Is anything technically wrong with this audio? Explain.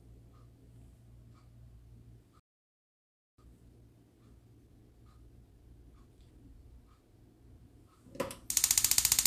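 Yes, there are two faults. The first is a playback stall from 2.40 to 3.38 s. The sound stops mid-flow and goes silent for almost a second. The likely cause is a player that ran out of data or had its thread blocked before it recovered.

The second is time-compressed catch-up from 3.38 to 6.38 s. The player works off its backlog by cutting out small pieces and cross-fading the gaps. The sound runs about 1.15 times faster at normal pitch.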